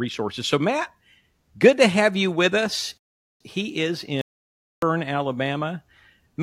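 At 2.98 s the speech stops dead in a rebuffering stall. Silence holds until 3.41 s, then the speech picks up exactly where it broke off. The player had run out of downloaded audio and waited for more to arrive. Nothing is skipped. The pause simply inserts about 0.43 s of extra time, an unnatural hold in the flow.

At 4.21 s an audio dropout to silence cuts in mid-flow. The gap runs to 4.82 s, about 0.61 s. It is silent, with no room tone underneath. When sound returns, the speech does not resume where it stopped. That stretch of speech is simply missing. The input signal was likely lost for that moment, through a failed link, a disconnected device or a stray mute, while the recording carried on writing silence.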